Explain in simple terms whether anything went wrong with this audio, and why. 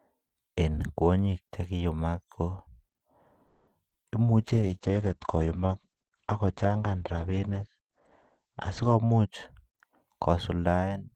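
At 3.47 to 3.69 seconds the speech stalls with a fading buzz, then resumes. This is a call audio freeze, likely from delayed packets.

At 3.89 to 3.93 seconds there is a brief smear. This short concealed packet loss happened because a tiny piece never arrived and was patched over.

From 4.43 to 9.35 seconds the speech sounds muffled and rough. This call bitrate drop happened because the connection weakened and the sound lost everything above 8 kHz.

From 8.95 to 10.74 seconds the speech runs about 9% faster without changing pitch. This jitter buffer speed-up trimmed roughly a sixth of a second to catch up.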